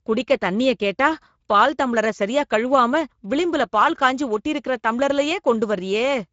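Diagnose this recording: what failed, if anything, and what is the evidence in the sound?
The failure is at the codec stage: Speex codec damage runs through the whole speech recording. The voice has a plainly audible hoarse, grainy quality because the CELP coder has too few bits to model the excitation faithfully, so the residual comes back noisy instead of clean. There is no content above 7.7 kHz, the ceiling of Speex's wideband mode. The degree of roughness points to a middle quality setting, roughly 17 kbps.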